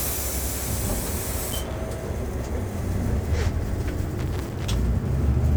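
A recording of sounds with two bursts of loose connector crackle, from 1.49 to 1.73 s and from 4.19 to 4.74 s. A worn or dirty contact is making and breaking as the cable moves, chopping the signal into irregular scratching.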